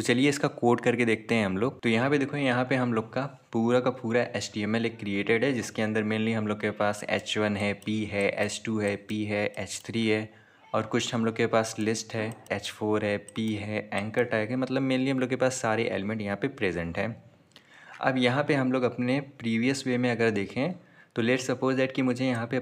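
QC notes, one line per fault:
No faults found on this pass; nothing to log.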